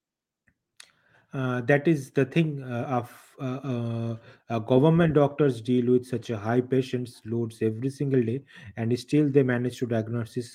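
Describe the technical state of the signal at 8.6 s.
At 8.6 s the speech signal is intact, with no audible fault at that moment.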